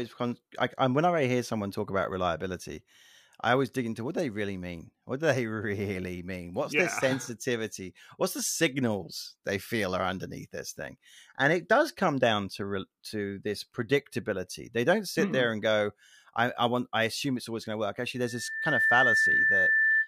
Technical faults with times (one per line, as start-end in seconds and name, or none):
18.15-20.07 loudspeaker feedback squeal